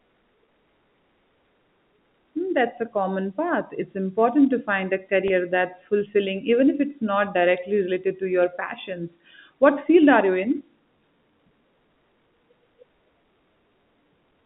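At 0.46 s and 5.28 s, just before "that's fulfilling even if", the speech briefly holds on a buzzy note. This is packet loss with pitch repetition: a 20 ms gap filled by repeating the last pitch period.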